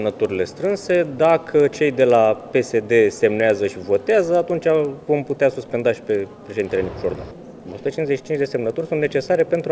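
A steady 20 Hz tick or buzz runs under the audio for the whole clip, heard only where there is signal. This is a resampler restarted on every block. The spacing points to 50 ms blocks, each converted alone, likely from 44.1 kHz down to 16 kHz, leaving a small error at every edge.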